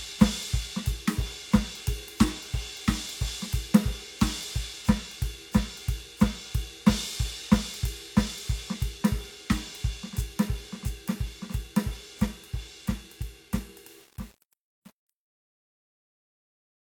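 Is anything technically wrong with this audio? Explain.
Yes. The music's fade-out, from about 13.9 s to 16.9 s, has truncation distortion from 13.91 s to 16.91 s. Undithered requantisation, consistent with roughly 8 bits, turns the quiet tail gritty, unlike a noise gate's clean on-off chopping.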